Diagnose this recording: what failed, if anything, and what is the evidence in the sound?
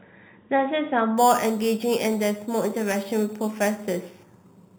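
From 1.18 s to the end, the speech gains a bright metallic fizz that tracks its level, with mirrored spectral copies starting in the 4 to 8 kHz band at about 16 dB below the signal. This is imaging from sample-and-hold upsampling in the sample-rate conversion stage: audio at 8 kHz was raised to 48 kHz by repeating each sample with no smoothing filter.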